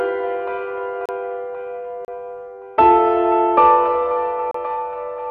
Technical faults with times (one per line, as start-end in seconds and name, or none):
1.06-1.09 block of digital silence
2.05-2.08 block of digital silence
4.51-4.54 block of digital silence